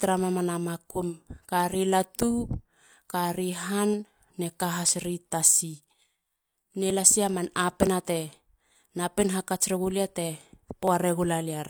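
Speech with small skips at 2.93, 3.94, 4.89, 5.91, 6.90, 7.87 and 10.88 s, from overlap between stream segments: 1-second segments trimmed, dropping 22 to 42 ms each.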